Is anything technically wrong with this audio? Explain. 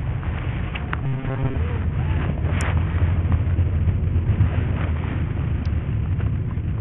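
Yes. Throughout, the sound has the heavy damage of what is likely Bluetooth SBC compression at a starved bit allocation, consistent with roughly 48 kbps. The top sub-bands drop out and flicker, leaving gritty noise and aliasing. Unlike a smooth low-pass cut, the treble comes and goes.

From 1.04 to 1.56 s, there is a robotic sound from repeated short buffers. A short stretch of about 7.5 ms is likely replayed in place of fresh audio for most of that span, forcing a rigid metallic buzz at 134 Hz. This is distinct from a dropout or stutter because the sound never goes silent.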